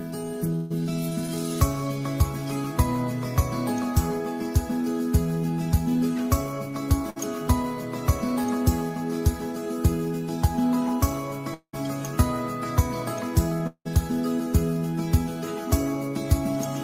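From 0.55 to 0.72 s there's a burst of packet loss: about 140 ms never arrived, so the receiver stretches the last sound into a fading tail before jumping ahead. A short concealed packet loss at 1.26 to 1.30 s, where 20 ms went missing, patches over the gap as a quick smear. Another burst of packet loss at 7.10 to 7.18 s fills about 60 ms the same way, and a second short concealed loss at 8.42 to 8.46 s smears 20 ms. At 11.54 to 11.75 s and again at 13.67 to 13.87 s comes what's likely a long network dropout. Roughly 200 ms and 180 ms are lost, each filled by a decaying continuation that ends in about 80 ms and 70 ms of silence before the sound resumes further on.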